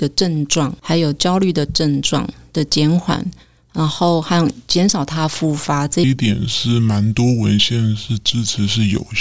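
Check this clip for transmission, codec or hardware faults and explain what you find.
One fault: a wrong sample rate in the final stretch. From 6.04 s to the end at 9.21 s, the speech drops to a low, dragging register, running at about 0.73 times normal speed and roughly 5.5 semitones lower. Samples are played without conversion at a slower rate than they were captured, which fits 22 kHz audio read out at 16 kHz.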